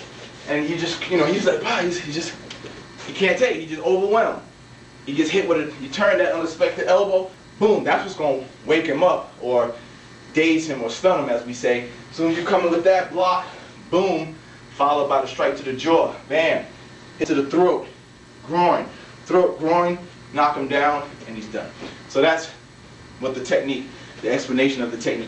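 A recorder likely working in 10-second chunks drops roughly a tenth of a second at each handover, so the audio jumps abruptly at 7.34 s and 17.24 s: audio missing between chunks.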